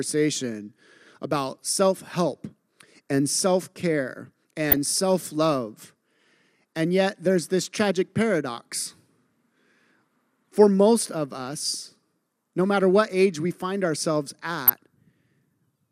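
Weak DAB reception lets a small share of bit errors, roughly 0.1 to 0.15 percent, slip past error correction into the MP2 data. This corrupts sub-band levels frame by frame. The resulting DAB burbling hits the speech at 4.69 to 4.77 s and again at 14.67 to 14.70 s as brief burbling.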